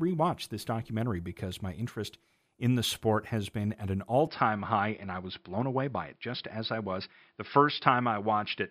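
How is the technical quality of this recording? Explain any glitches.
The recording has one clear fault. From 4.27 s to the end, the speech turns dull and boxy, with nothing above 5.3 kHz. The likely cause is an input switched to a poorer device, which passes a narrower band and has its own coloration. There is no gap at the switch and no real level change. A plain bandwidth cut would leave the background untouched, but here a faint new noise floor, about 50 dB down, appears with the new tone, which points to a different device.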